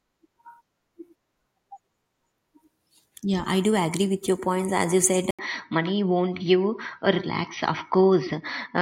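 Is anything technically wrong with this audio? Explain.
Yes. An input switched to a poorer device at 5.31 s, through to the end: a brief gap of about 80 ms, then speech at much the same level but cut off above 5.9 kHz, duller and boxier, over a faint new noise floor, likely from the recording input changing to a narrower-band microphone.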